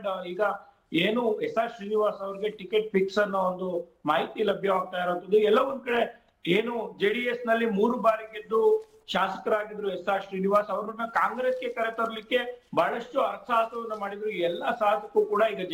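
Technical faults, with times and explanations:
Throughout: sample clock jitter. The converter's timing wanders by roughly 3 microseconds RMS, so each sample lands a little early or late at random. Where the waveform is changing fast, that timing slip becomes an amplitude error, sitting roughly 35 dB below the sound. It is heard as a grainy hiss riding on the audio, strongest on loud passages and high-frequency content and falling away to nothing in quiet stretches.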